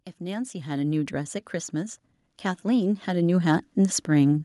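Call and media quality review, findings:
Automatic gain rising, 0.18–2.06 s (about 7 dB) and 2.62–4.4 s (about 8 dB). AGC raising gain on quiet input. Background swells with voice, so not a talker moving closer.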